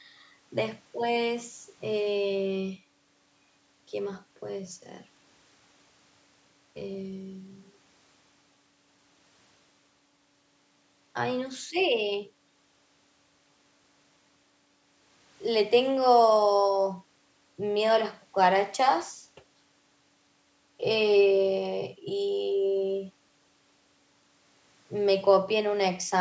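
Speech with no technical faults.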